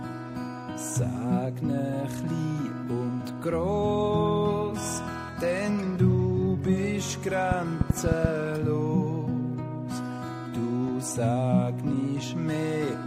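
From 7.52 to 8.26 s, a train of clicks, about seven unevenly spaced pops (around 6.9 per second) roughly 20 dB above the sound, likely from interference. They show as thin vertical broadband lines on a spectrogram and as sharp spikes on the waveform.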